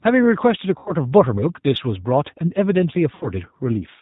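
The whole clip carries G.729 codec damage. It is plainly audible at 8 kbit/s. Nothing above 4 kHz survives, and the speech sounds rough and synthetic.

From 0.78 to 0.95 s, VoIP packet loss concealed by the speech codec appears. About 80 ms of audio is missing, consistent with four 20 ms packets. The decoder stretches its last frames into a fading buzzy tone or coloured noise. At 3.15 to 3.30 s it recurs, with about 60 ms lost, and the speech stays weak briefly afterwards.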